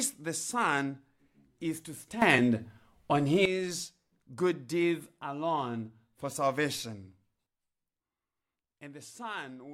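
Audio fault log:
2.22–3.45 s and 7.47 s to end, sudden gain jump: the level steps up by about 13 dB, then returns, then falls by about 10 dB. Sound and background noise shift together at each edge, likely from gain applied instantly without a ramp.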